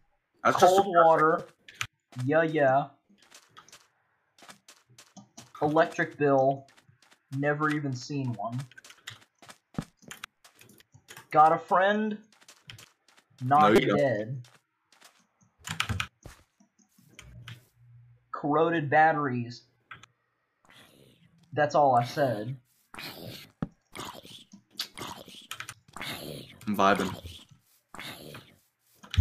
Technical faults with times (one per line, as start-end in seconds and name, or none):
1.39 repeated buffer
13.76-13.78 repeated buffer